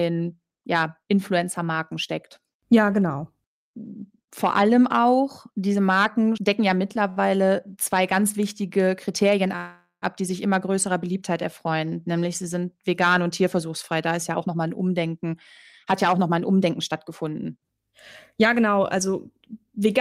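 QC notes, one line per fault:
7.10–7.19 s, short stall from a late packet: the speech hangs on its last sound for about 65 ms, with a faint buzz or dip instead of a clean continuation. A packet arrived late, the jitter buffer ran dry, and the receiver stretched the previous audio to bridge the wait. Playback then resumes exactly where it stopped, so nothing is lost, but the timing slips by those 65 ms.
9.56–10.05 s, call audio freeze: the speech stops and is replaced by a prolonged continuation of the last sound that decays into about 120 ms of silence before the audio returns. Roughly 456 ms of filler is inserted in all. The likely cause is a burst of packets held up in transit, which emptied the jitter buffer for the whole gap. Speech picks up where it left off, so no content is missing, only delay added.
14.34–15.35 s, 15.84–17.93 s and 18.34–20.01 s, jitter buffer speed-up: the speech runs fast at unchanged pitch, at 118%, then 108%, then 106%. 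All three spans sound hurried. The buffer held more audio than its target, so the receiver trimmed many short pitch-period slices to catch up. That removes about 0.2 s, 0.15 s and 0.1 s respectively.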